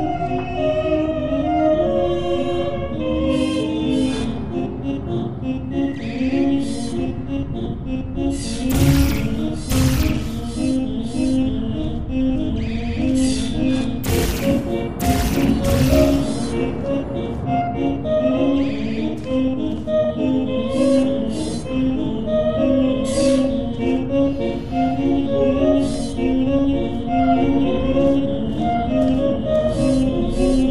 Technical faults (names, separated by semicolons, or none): none